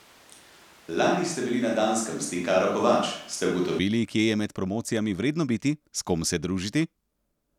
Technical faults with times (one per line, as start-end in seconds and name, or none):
0.00-3.79 switch to a distant microphone